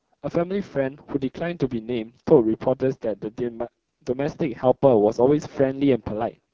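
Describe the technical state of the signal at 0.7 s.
AMR wideband (HD Voice) codec coding runs through the whole clip, 0.7 s included. At roughly its lowest rate, the pulse-driven vocal tract model leaves this speech heavily rough and raspy.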